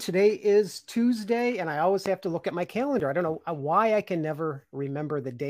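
At 2.06 to 2.08 s, between "and I always" and "have to look at", a single loud pop jumps well above the speech, likely from a sudden electrical voltage spike.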